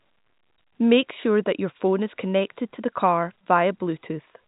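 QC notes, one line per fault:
No faults to log in these QC notes; the speech carries the narrow band of G.711 telephone coding, with nothing above 3.8 kHz.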